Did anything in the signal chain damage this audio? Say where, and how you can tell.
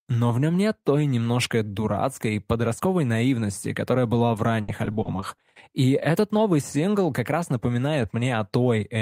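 Yes. Repeated packet loss (robotic sound) in the network stage, from 4.28 to 5.40 s: about ten short dropouts, the longest 70 ms, are each patched by extending the preceding sound, about 190 ms in all, 17% of that stretch, giving choppy speech with pieces missing.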